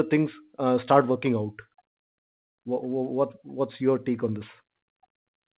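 No technical faults occur in the speech, which arrives over a G.711 call path that carries nothing above 4 kHz.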